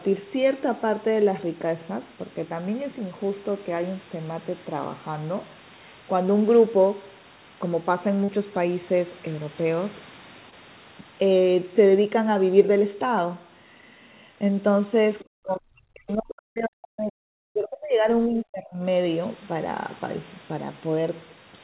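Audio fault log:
8.24 s, 10.50 s and 16.58 s: short concealed packet loss. Gaps of 40, 20 and 20 ms were bridged by extending the preceding sound, giving a brief smear rather than the clean silence of a dropout.
15.29–17.20 s and 17.49–18.84 s: speech suppressed in double talk. Level sinks by about 40 dB, then about 30 dB, over spans of seconds, likely an echo canceller turning down the voice along with the loudspeaker echo while both sides overlap. These are sustained fades, not the millisecond glitches of packet loss.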